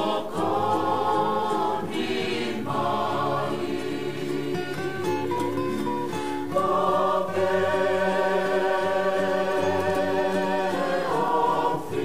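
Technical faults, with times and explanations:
No technical faults can be heard in this recording.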